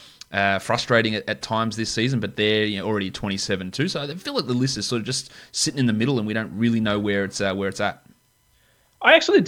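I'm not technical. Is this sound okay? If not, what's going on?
Yes, the recording shows no technical faults at any point.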